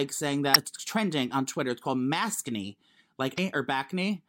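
Right from the start and all the way through there's sample clock jitter. The converter clock wobbles by something like a microsecond and a half, so samples land a touch early or late. That puts a fine hiss under the speech, roughly 35 dB down, rising on loud, bright syllables and dropping out in the gaps.

At 0.51 to 0.56 s, just before "trending on", and again at 3.34 to 3.38 s, you get damaged data in a compressed stream. The decoder hits corrupted frames, loses sync and hunts for the next header, so each spot comes out as a short glitch.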